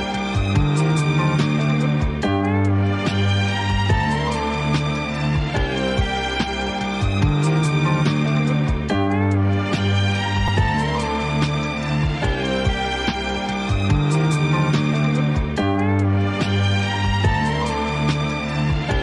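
At 10.48 s there is a repeated buffer: fresh audio arrived late, so one roughly 5.8 ms piece, which fits a 256-sample buffer, plays three times with hard joins. Being so short, it sounds like a click or brief buzz rather than a stutter, and unlike a dropout, no silence or missing sound follows.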